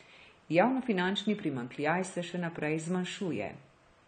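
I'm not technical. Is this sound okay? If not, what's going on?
No. Throughout the speech there is plainly audible AAC compression damage, likely from heavy data-saving encoding. Nothing above about 9 kHz survives, so the sound is dull and muffled, and hissy consonants such as s sounds take on a smeared, fizzy, warbling texture.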